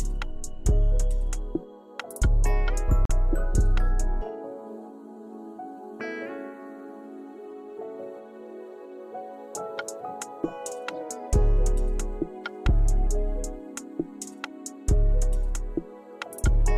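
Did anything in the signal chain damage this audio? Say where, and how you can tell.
Yes, at the network stage. Around 3.05 to 3.11 s there is short concealed packet loss. About 40 ms of audio arrived too late. The decoder filled the gap by extending the preceding sound, then blended back in. You hear a brief smear.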